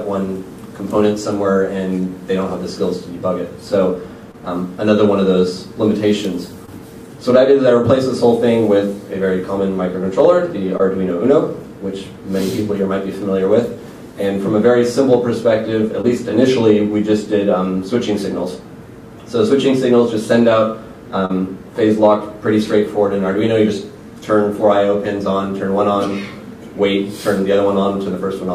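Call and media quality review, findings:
Short concealed packet loss at 4.31, 6.66, 10.77, 16.01 and 21.25 to 21.31 s. Brief smears and wobbles. Receiver jitter buffer and decoder concealment. About 20 ms lost each time, 40 ms at 21.25 s. The gap is filled by extending the preceding sound, then blended back.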